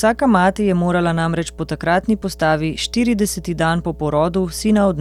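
Mains hum runs under the speech from start to end. A steady 60 Hz tone sits about 20 dB below the voice, from power-line coupling through a ground loop or transformer.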